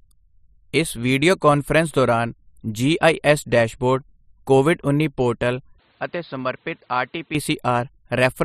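Input switched to a poorer device, from 5.79 to 7.35 s: the speech abruptly turns duller and quieter, dropping by about 10 dB with nothing above 5.1 kHz and a new noise floor around 35 dB down, likely because recording moved to a lesser microphone without any gap.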